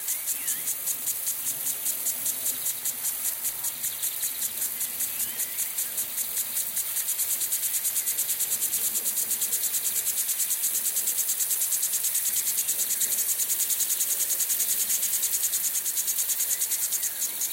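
At 9.22, 10.58, 13.14 and 14.93 s the sound jumps ahead, with roughly a tenth of a second missing at the first two points, around a third of a second at 13.14 s and about 150 ms at 14.93 s. This is likely a dropped buffer (overrun): samples were overwritten before being read, and the surrounding audio was spliced together. Unlike an underrun, no gap of silence is heard, only the skip.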